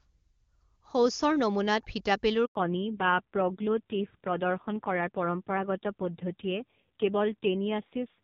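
Speech, with a handover gap from 2.45 to 2.55 s: as the call switches networks, no frames arrive for 100 ms, so the voice fades out within a few tens of milliseconds and drops to silence. The waveform shows a flat line there, and the spectrogram shows a blank vertical strip across all frequencies. From 2.55 s to the end there is a fallback to narrowband. Before the break, the HD Voice codec sounds clean, consistent with AMR-WB at around 23.85 kbit/s. Afterwards the audio turns muffled and raspy, which points to AMR-NB at a low rate near 5.9 kbit/s. On a spectrogram, energy stops sharply at 4 kHz for the rest of the clip.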